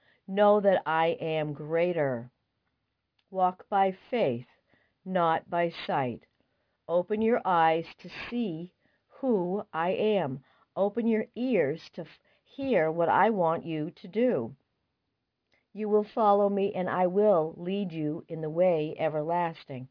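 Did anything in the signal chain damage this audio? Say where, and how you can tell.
Yes. The damage happened at sample-rate conversion, and it is aliasing throughout the clip. Content above about 5.5 kHz has folded back down into the band as gritty, metallic tones at pitches unrelated to the source. The spectrum runs hard up to 5.5 kHz and stops there. That points to a drop from 44.1 kHz to about 11 kHz without an anti-aliasing filter first. The folded energy sits roughly 30 dB below the signal. It is quiet, heard as grit on bright sounds.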